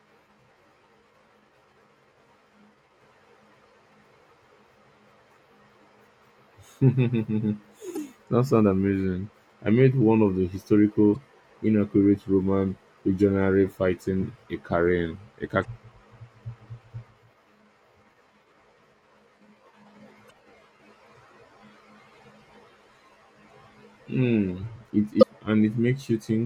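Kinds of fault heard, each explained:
Damaged data in a compressed stream: Parts of the coded speech stream are corrupted, so the decoder misreads those frames and must find its place again. Each one is heard as a brief chirp, squawk, click or short gap breaking into the speech. There are five, at 7.94–7.97 s, 11.14–11.16 s, 15.61–15.65 s, 20.27–20.31 s and 25.19–25.23 s. Each lasts only 20 to 44 ms. They come at irregular intervals of roughly three to five seconds.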